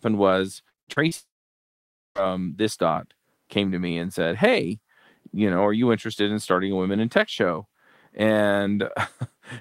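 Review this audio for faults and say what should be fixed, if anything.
Repeated packet loss (robotic sound) runs from 0.69 to 1.13 s. Five short gaps, the longest 59 ms, are each patched by extending the preceding sound, so about 40% of that span is synthetic fill. The result is choppy speech with fragments missing.

A long network dropout follows at 1.17 to 2.21 s. The last sound is briefly stretched into a fading buzz or hiss, then about 0.88 s of near-silence remains before speech resumes with roughly a second of audio lost. The likely cause is a stall in packet delivery rather than a fault in the source.

Both faults can be prevented by stabilising the network path and adding a larger adaptive jitter buffer with forward error correction or redundant packets.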